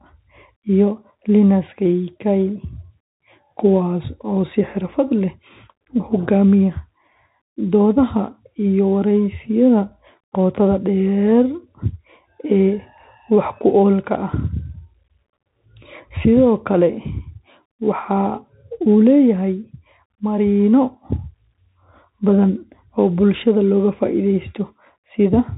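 It's a speech recording pushed through a Bluetooth CVSD headset codec the whole way through. Everything above 4 kHz is gone, sibilants sound scratchy, and a granular hiss sits underneath, which fits a 64 kbps one-bit stream.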